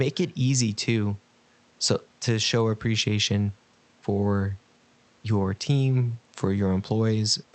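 No faults in this speech recording; the call codec's presence shows as high frequencies rolling off near 8 kHz, which fits Opus at a moderate bitrate.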